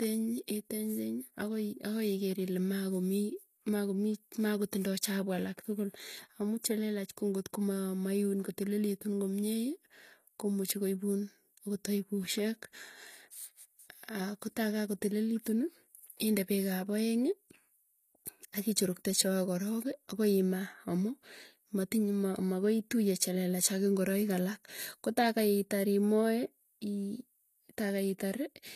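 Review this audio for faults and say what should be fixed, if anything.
Throughout the speech, nothing sits above 15 kHz, a hard ceiling on the spectrogram. This is likely low-bitrate audio saved at a high bitrate as MP3. Encode from the original source, not an earlier low-bitrate copy.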